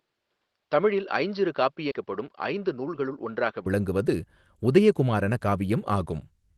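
Speech that opens dull and narrow: from 0.0 to 3.66 s nothing reaches above 5.8 kHz, the level sits about 5 dB lower, and faint new noise lies roughly 55 dB down. The sound then brightens with no silence at the join, which points to an input switched to a poorer device. At 1.91 to 1.93 s a skip ahead drops roughly 0.7 s of speech, and the two sides butt together almost seamlessly. Unlike a dropout, there is no audible gap, only missing material. From 2.05 to 3.39 s a jitter buffer speed-up runs the speech at 106% with pitch unchanged, trimming about 100 ms in many small cuts, so it sounds hurried rather than jumping. Underneath, the Opus call path's coding noise and its 12 kHz ceiling fit a rate near 24 kbps.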